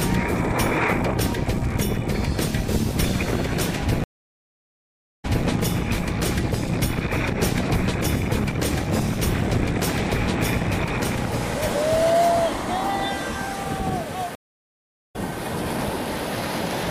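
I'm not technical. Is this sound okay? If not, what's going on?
No. Twice the player lost its connection, reconnected, and restarted partway through the sound, a stream reconnect. At 4.04 s the sound drops out for about 1.2 seconds, then returns at 5.47 s slightly earlier than where it stopped, so about a quarter-second is repeated. At 14.35 s it goes silent for about 0.8 seconds, and at 15.16 s it picks up roughly a second later, so that part is skipped. Each restart comes back softly.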